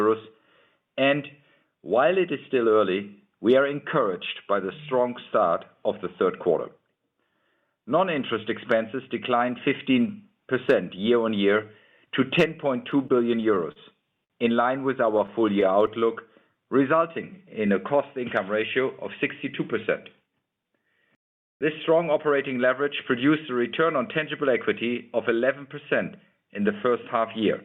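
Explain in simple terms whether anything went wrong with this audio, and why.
Repeated stalls (stutter), from 12.91 to 13.79 s: packets kept arriving late, so the receiver's waiting store of audio ran empty six times. Each time it carried the last sound on, 84 ms in total, the longest wait 40 ms. Nothing is lost, but the sound drags and stutters.

A short stall from a late packet, from 14.24 to 14.33 s: one packet was not there on time, so the receiver held the last sound for 60 ms until it came, then carried on from the same spot. Nothing is missing, but that moment lasts too long.

Scattered short gaps, from 15.18 to 16.04 s: about five packets went missing or came late, one at a time. The receiver filled each little hole by stretching the sound before it. Each hole lasts about 20 ms at most, roughly 50 ms in all, heard as brief ticks or smears.

A jitter buffer slow-down, from 16.55 to 17.67 s: the receiver's store of audio was running low, so it built up a reserve by repeating tiny slices of sound many times over. 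This added 69 ms, and the audio plays at about 94% speed at the same pitch.

A jitter buffer speed-up, from 20.21 to 22.32 s: too much audio had piled up waiting, so the receiver cut out tiny slices again and again, roughly 150 ms in all. The audio runs at about 107% speed at the same pitch and sounds hurried.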